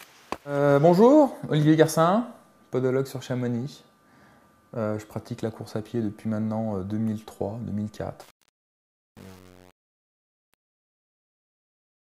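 From 8.21 s to the end at 12.16 s, the fade-out shows truncation distortion. The fade itself starts around 8 s and runs down in level. The gain stage keeps too few bits and adds no dither. The coarse steps suggest roughly 7-bit resolution. As the level sinks toward the smallest step, the waveform collapses into square blocks. The tail turns gritty.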